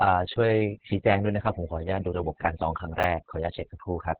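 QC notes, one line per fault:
Throughout: overdone noise removal. The denoiser's been pushed way too hard, so bands near its noise estimate get gated right down, taking the quieter bits of speech with them. You get near-silent gaps with little twinkling specks.
Throughout: Opus voice compression. Nothing above 4.5 kHz survives, so it's squeezed into narrowband, which fits the SILK voice coder running at a very low rate, around 6 kbps. The excitation's coded coarsely, so the speech sounds muffled, hoarse and a bit robotic.
3.00 to 3.04 s: chunks out of order. A 10 ms chunk turns up three chunks late and plays after audio that should've followed it. Nothing's actually missing, but the shuffle leaves hard joins, so there's a brief jumbled blip.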